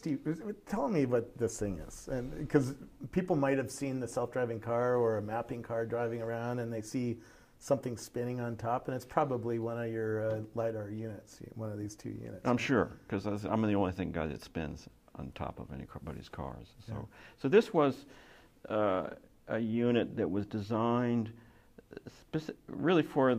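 No technical faults are audible.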